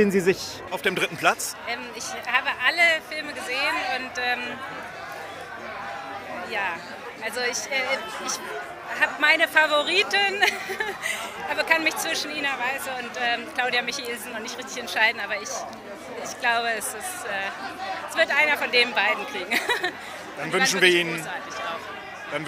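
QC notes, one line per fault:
0.68–22.48 s, pre-emphasis left on: the sound turns thin, bright and hissy, with sibilant edges and little body underneath. The treble sits about 11 dB higher at 10 kHz than at 1 kHz, a rising tilt that fits a J.17 emphasis curve. The treble boost applied for recording or transmission was never undone by the matching de-emphasis cut on playback, so the upper range stays lifted from just after the start to the end.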